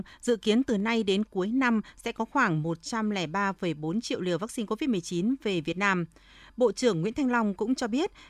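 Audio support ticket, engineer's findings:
Two sharp clicks in the speech, at 3.78 s and 7.80 s. Likely dropped samples: a fraction of a millisecond missing, so the waveform steps abruptly between values. Shows as a vertical step on the waveform and a thin full-band line on the spectrogram.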